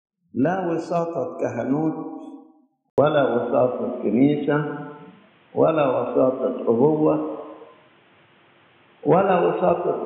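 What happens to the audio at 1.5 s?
Nothing goes wrong at 1.5 s: the audio plays through that moment without any audible dropout, click, distortion or other fault.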